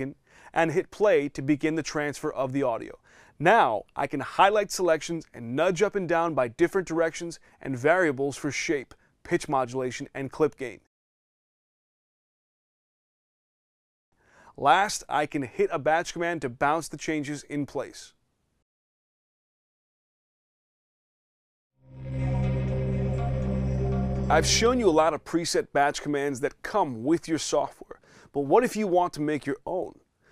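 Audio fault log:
No audible faults detected.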